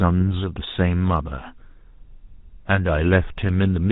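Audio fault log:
throughout, GSM full-rate codec: the speech has a buzzy, gravelly roughness, consistent with a 13 kbps GSM full-rate stream, where a vocal-tract model is driven by sparse regular pulses. A spectrogram shows nothing above 4 kHz and coarse, smeared harmonics below.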